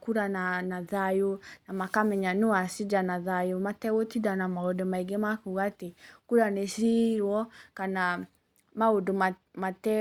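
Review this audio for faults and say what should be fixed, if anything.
Nothing needs fixing; no faults are audible anywhere.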